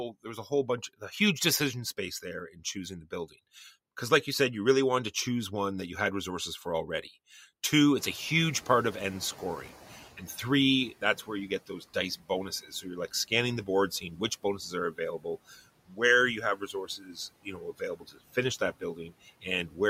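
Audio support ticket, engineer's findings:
Noise suppressor catching up, 7.97 to 10.87 s. Room noise jumps about 24 dB near 8 s and passes through, then sinks about 12 dB over 2.9 s as the suppressor's estimate adapts.

Speech cut by the noise suppressor at 11.01–11.95, 12.62–13.31, 14.01–16.0 and 16.56–19.78 s. Speech is mistaken for noise and attenuated about 11 to 16 dB, worsening toward the end.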